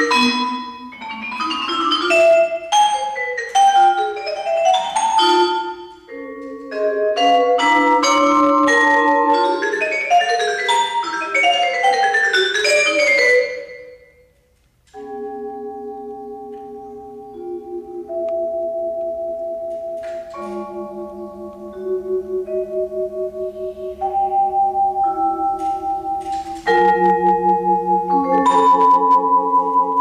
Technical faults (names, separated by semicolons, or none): hard clipping